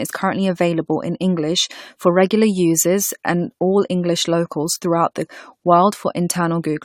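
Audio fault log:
throughout, generation loss: the speech has a swirly, hollow smear and blurred consonant attacks, more than a 96 kbit/s AAC-LC encode alone would give. That likely comes from roughly five rounds of lossy re-encoding, each pass quantising on a shifted frame grid so the damage piles up.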